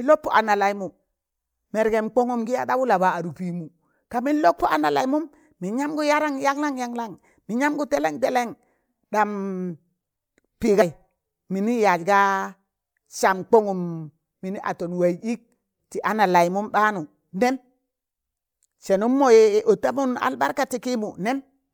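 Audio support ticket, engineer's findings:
Compressed frames skipped at 10.80 s. Speech jumps ahead by about seven frames, roughly 150 ms lost, fitting a frame length of about 26 ms. Decoder stage. Short smeared blip at the join, not a hard click or silent gap as with a dropout.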